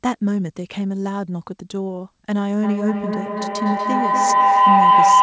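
At 2.63 s a tone near 1 kHz rises out of the speech and keeps swelling, the loop repeating roughly every fifth of a second, until it sits about 9 dB above the speech and holds to the end of the clip. This is feedback howl. A microphone and loudspeaker in the same room are both on the call, and each trip around that loop adds level. The repeats grow and narrow to the pitch the loop favours, over a call codec band that stops at 8 kHz.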